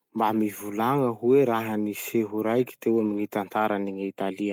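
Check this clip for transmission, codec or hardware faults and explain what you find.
There is one transmission fault in this speech clip, a lost packet rebuilt from error correction, from 3.05 to 3.19 s. Four separate packets went missing. Each following packet carried a low-bitrate spare copy of the one before. The decoder played those copies, so nothing drops out. About 80 ms was rebuilt this way, which fits four 20 ms packets. That stretch sounds rougher and noisier than the speech around it.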